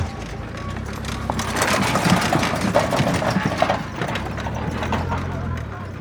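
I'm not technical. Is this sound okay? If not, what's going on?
Yes, this sound is fine; there's nothing wrong with it that you'd need to worry about.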